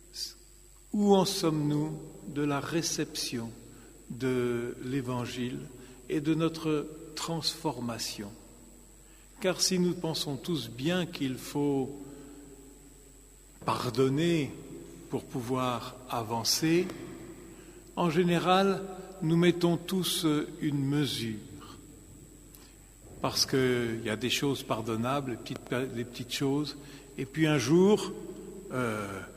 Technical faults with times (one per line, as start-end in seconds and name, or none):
16.90-16.92 loud pop
25.56-25.69 loud pop